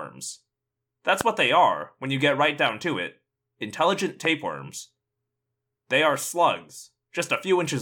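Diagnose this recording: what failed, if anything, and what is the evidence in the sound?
Two loud pops sit on top of the speech, one at 1.21 to 1.23 s, just before "what they are when", and another at 4.25 to 4.27 s, right after "down to it intelligent". The first stands further above the speech than the second, and the speech carries on underneath both. Likely a voltage spike from a plug, switch, static or a driver glitch, in the analogue wiring or the driver.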